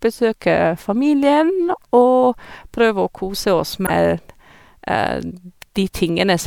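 At about 3.83 s the speech gets hit by damaged data in a compressed stream, lasting roughly 70 ms until 3.90 s. What you hear is a short chirp, squawk, click or hole cutting into the audio. Some bytes in that stretch of the encoded file are wrong, so the decoder can't make sense of those frames, loses its place, and has to hunt for the next valid frame header before normal playback picks up again.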